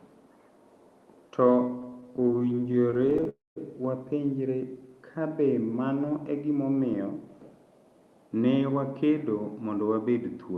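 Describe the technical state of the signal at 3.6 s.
A call audio freeze runs from 3.29 to 3.58 s, likely from delayed packets draining the jitter buffer. The last sound fades to silence, then resumes at "wapenjre ka be mano" about 270 ms late, with nothing lost.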